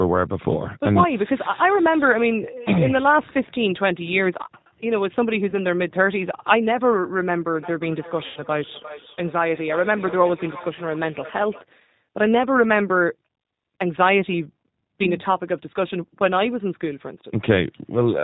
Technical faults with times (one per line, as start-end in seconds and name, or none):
0.00-18.24 G.729 codec
5.50-5.58 VoIP packet loss concealed by the speech codec
8.26-8.43 VoIP packet loss concealed by the speech codec